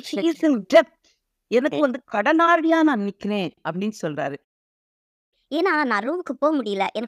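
Between 0.75 and 0.79 s the loudest peak is driven about 4 dB past full scale and a sizeable share of samples are flattened. This is microphone overload, likely from input volume set too high. Unlike codec distortion, the harshness is a brief crackle confined to that peak.

At 0.77 s, right inside that distorted peak, the level of both the voice and the background falls by about 2 dB. At 2.88 s it falls again, by about 3 dB. This is the microphone volume stepped down, likely by the call software reacting to overload. Because the step is sudden and then holds steady, it is not a gradual compressor or fade.

From 4.44 to 5.34 s the output goes completely silent for about 0.88 s mid-flow. This is a playback stall, likely because the player ran out of data. There is no noise floor during the gap, which sets it apart from a dropout in the transmitted signal.

From 5.34 s to the end, the speech runs at 1.25 times normal speed and its pitch is raised by around four semitones. 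This is catch-up at higher speed, with the player resampling its backlog to recover lost time. Pitch and tempo rise together, so it is not time-stretching.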